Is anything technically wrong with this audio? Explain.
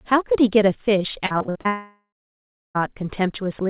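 Yes. From 1.26 to 1.67 s, repeated packet loss (robotic sound): seven gaps up to 53 ms long are patched by repeating the last sound, about half the span. It sounds choppy, with smeared, repeated slices on a spectrogram.

From 1.67 to 2.77 s the sound breaks off and fades, leaving about 0.68 s of silence before it returns with the middle missing. The cause is likely a long network dropout. It shows as a fading hum and then a flat waveform, all within a band that stops at 4 kHz from the G.711 call path.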